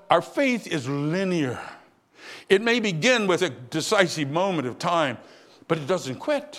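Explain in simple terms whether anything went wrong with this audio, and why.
Nothing went wrong with this recording.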